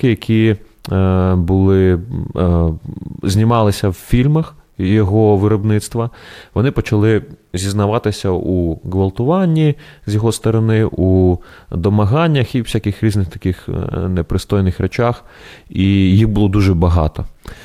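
From start to finish the speech carries a grainy, rough texture that tracks the signal. It thickens in quiet passages. The likely cause is low bit depth without dither, with the audio rounded to about 10 bits, leaving error roughly 50 dB below the signal. On a waveform the decays show visible stair-steps. A spectrogram shows broadband grit appearing only where sound is present, with none in the pauses.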